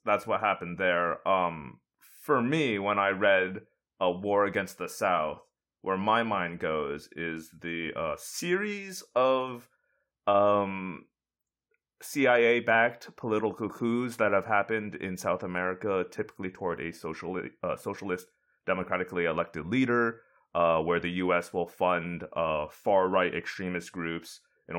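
Listening to the speech recording, nothing technical stood out.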